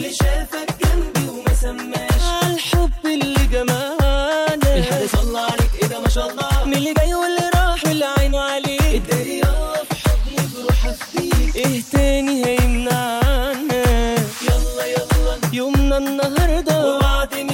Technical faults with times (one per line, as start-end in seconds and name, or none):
4.80-7.14 time-stretched section